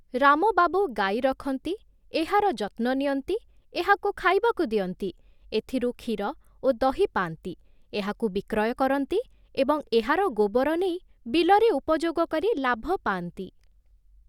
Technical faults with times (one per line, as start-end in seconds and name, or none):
none